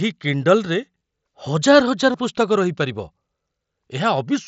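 A speech clip with two short dropouts from concealed Bluetooth headset packet loss, at 0.99 to 1.01 s and 2.12 to 2.14 s. Each gap lasts about 22.5 ms, which fits three lost headset packets in a row. The receiver filled each hole by repeating the best-matching piece of the preceding waveform. The result is a brief buzzy, steady tone at full level. A slight warble follows as real audio resumes. The speech itself carries the light graininess of the mSBC headset codec.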